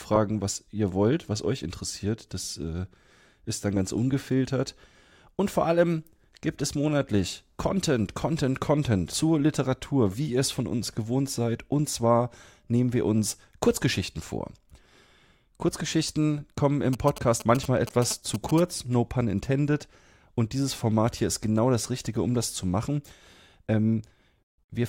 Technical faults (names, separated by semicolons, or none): damaged data in a compressed stream; GSM signalling bursts